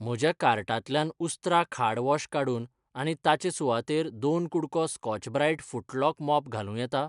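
Nothing in this speech recording reveals a technical fault. At no point is the audio interrupted or altered.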